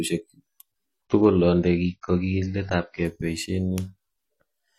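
From 1.05 to 3.05 s, the adaptive stream drops to a lower bitrate. The speech turns dull and smeared, with nothing above 6.6 kHz. That fits a fall to about 24 kbit/s.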